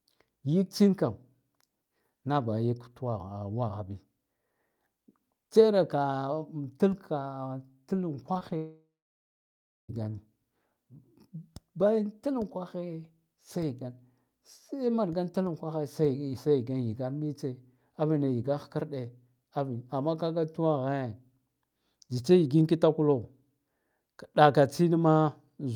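Short concealed packet loss strikes three times in quick succession, at 8.33 to 8.37 s, 8.39 to 8.43 s and 8.49 to 8.53 s. Each time about 20 ms of the speech failed to reach the decoder in time, and the receiver patched the gap by extending the preceding sound for 15 to 22 ms before blending back into the real signal. The result is a rapid cluster of small smears and wobbles.

A long network dropout follows at 8.57 s and lasts until 9.90 s, most likely from the connection stalling. About 1.3 s of speech never arrived. At first the receiver keeps stretching the last sound as a fading buzz or hiss, but roughly the final second of the gap is plain silence. When the audio resumes at 9.90 s, the lost stretch is simply missing rather than delayed.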